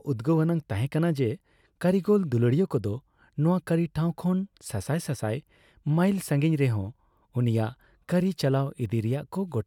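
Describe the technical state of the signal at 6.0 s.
At 6.0 s the speech signal is intact, with no audible fault.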